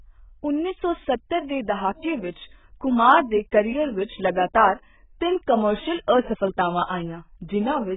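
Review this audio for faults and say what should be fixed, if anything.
Throughout the speech, nothing sounds above 3.8 kHz, and what remains is dull, smeared and warbling, with fizzy sibilants. This heavy damage is likely AAC compression: AAC-LC at a rate that points to roughly 8 kbps, quantising coarsely and discarding bands. A spectrogram shows a hard ceiling at 3.8 kHz with patchy holes beneath it. To prevent this, encode at a much higher bitrate or keep an uncompressed master for delivery.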